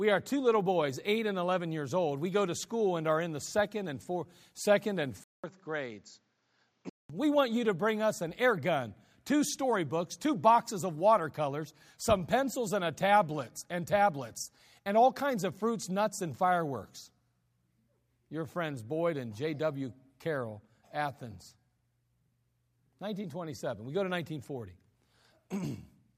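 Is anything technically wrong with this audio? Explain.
Yes. From 5.24 to 7.10 s, after a 200 ms gap, the speech turns dull and a few decibels quieter with faint new noise. The input was likely switched to a poorer device. A spectrogram shows nothing above 7.6 kHz, and the waveform shows a flat gap and a smaller envelope.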